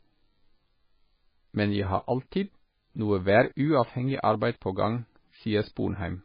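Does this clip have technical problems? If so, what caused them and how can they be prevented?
Yes. Throughout the speech, the sound is watery and swirly, with smeared consonants and nothing above 5 kHz. This is likely heavy MP3 compression: starved of bits, the encoder dropped the treble and let weak frequency lines flicker between frames, which fits a bitrate around 16 kbps. To prevent it, encode at 128 kbps or more, or keep a lossless copy.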